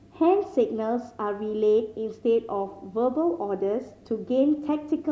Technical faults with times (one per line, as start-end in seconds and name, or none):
none